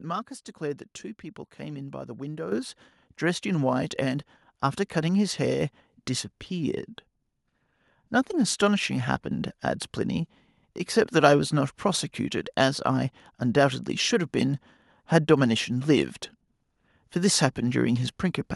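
At 2.52 s the microphone volume stepped up. The level jumps by about 8 dB in a single step. The change is instant, not a gradual fade. The call software judged the input too quiet and raised the device's input volume in one move. Because the boost happens at the microphone, everything it picks up gets louder together. The speech and the background noise rise at the same moment and stay at the higher level.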